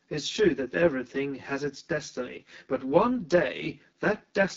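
Throughout the speech, channel delay causes comb filtering. One channel lags by around 10 ms before the mono sum. Evenly spaced notches from around 40 Hz make it hollow and phasey.

The AMR wideband (HD Voice) codec also runs throughout. Nothing sounds above 7.5 kHz. Plainly audible rough, raspy texture points to one of AMR-WB's lowest rates.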